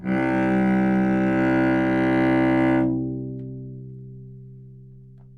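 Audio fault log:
Nothing stood out on listening to this recording of sounds.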